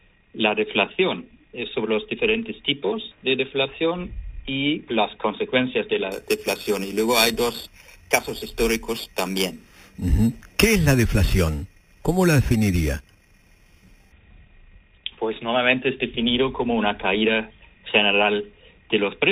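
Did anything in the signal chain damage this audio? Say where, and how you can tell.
Yes. Between 6.12 and 14.12 s, the upsampling stage of the converter added imaging from sample-and-hold upsampling. A bright, metallic fizz sits about 13 dB below the sound and rises and falls with it. The first mirror band fills 4 kHz to 8 kHz, which fits an 8 kHz stream raised to 48 kHz by repeating each sample with no smoothing filter. The held steps fold the spectrum upward, and the lowest copy moves opposite to the pitch.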